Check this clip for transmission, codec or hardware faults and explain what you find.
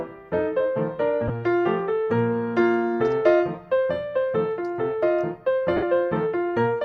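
The clip has lost LE Audio frames at two points. The lossy compression on the path adds only light codec damage.

Lost LE Audio frames, 1.28 to 1.30 s and 5.76 to 5.83 s. The gaps are about 15 ms and 60 ms long, which fits two and eight 7.5 ms frames. When Bluetooth LE Audio frames go missing, the LC3 decoder refills each gap by repeating the last good spectrum with randomised signs, then fades it after the first few frames. Tonal content turns into a brief noisy smear. The longer 60 ms gap gives the decoder room to fade, so that smear tapers off. On a spectrogram, the harmonic lines blur into diffuse, broadband texture in both spans, and the second span thins out toward its end. On the waveform, regular periodic cycles are replaced by irregular, noise-like fill whose envelope drops across the later gap.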